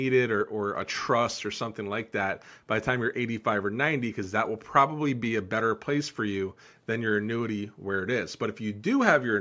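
No technical faults are audible.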